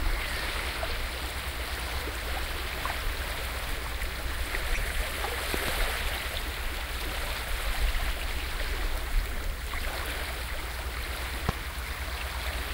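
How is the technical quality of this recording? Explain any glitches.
The recording has two kinds of glitch, each occurring twice.

Corrupt frame decoded at 4.74–4.80 s and 8.02–8.05 s: damaged compressed frames, roughly two then one, were still decoded, misplacing energy as brief artifacts peaking around -15 and -20 dBFS.

Loud pop at 5.54–5.71 s (two pops) and 11.49–11.51 s: sharp pops about 20 dB above the audio, likely from electrical transients from switching or connectors, with the sound continuing underneath.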